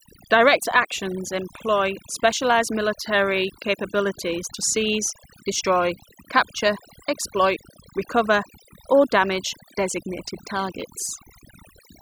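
Overdone noise removal runs through the whole clip. The noise reduction was set too aggressively, shutting down individual frequency bands whenever they sat close to its noise estimate. Quiet parts of the voice were removed along with the noise. The background drops and breaks up into twinkling specks.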